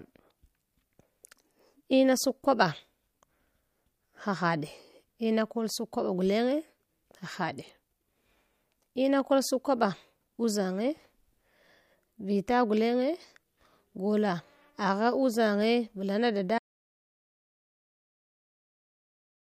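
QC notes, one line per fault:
16.58 s to the end: audio dropout to silence. The speech cuts off abruptly mid-flow and never returns. The remaining seconds are silence with no room tone, unlike a fade or noise gate, which would taper or leave a noise floor. The input was likely lost, with the recorder still writing zeros.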